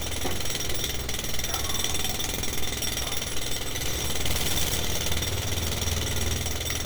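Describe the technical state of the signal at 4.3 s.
At 4.3 s the signal is inside a stuck bit fault running from 4.26 to 4.76 s, likely one data bit frozen at a fixed value, shifting about half the samples by a step of roughly -25 dBFS. It sounds harshly buzzy, shows as a squared, stepped waveform, and smears broadband noise across the spectrogram.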